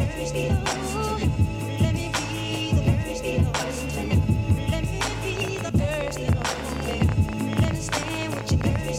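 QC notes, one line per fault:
5.37–8.89 s, train of clicks: about 50 same-shaped pops, roughly 10 dB above the music, at 14.8 per second, unevenly spaced, unlike random crackle; likely interference.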